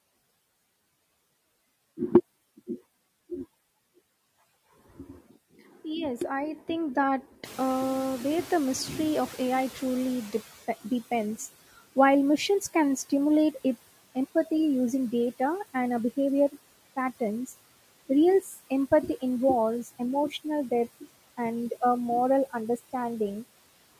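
At 2.67 s a sudden gain jump drops speech and background together by about 4 dB and stays lower to the end, likely from an unramped gain change. The waveform envelope steps down at once.

From 7.44 to 10.7 s the noise suppressor is catching up. Room noise rises sharply near 7.5 s and passes through at first, then fades over 3.26 s as about 13 dB of reduction takes hold. On a spectrogram the broadband noise floor brightens, then darkens.

From 18.42 to 18.71 s speech is cut by the noise suppressor. About a tenth of a second of soft sound sinks by up to about 8 dB and sounds swallowed. The spectrogram shows brief thinned gaps in the speech energy.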